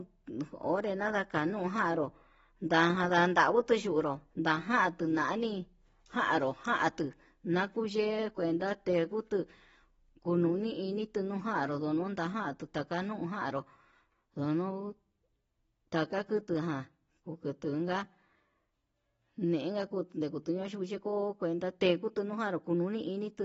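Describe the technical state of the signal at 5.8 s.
At 5.8 s the speech carries AAC compression damage that runs through the whole clip. Nothing survives above about 7.7 kHz, so on a spectrogram the energy stops at a flat ceiling with patchy, blotchy gaps below it, while the waveform looks ordinary. The likely cause is AAC-LC coding at a low bitrate, around 24 kbps, which sacrifices the top band and thins the spectrum, leaving the sound dull, smeared and warbly, with fizzy sibilants.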